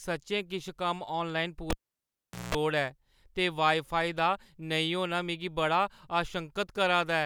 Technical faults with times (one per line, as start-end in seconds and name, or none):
1.70-2.55 cable pulled and plugged in